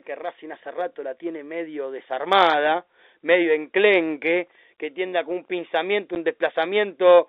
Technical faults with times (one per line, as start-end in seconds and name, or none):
6.15 packet loss filled with silence